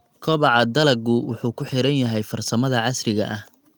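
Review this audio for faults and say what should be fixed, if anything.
Nothing needs fixing, because no faults can be heard in this audio.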